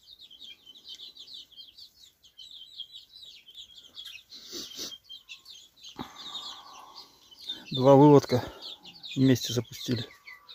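No technical faults can be heard anywhere in the clip. Nothing interrupts, distorts or degrades the audio at any point.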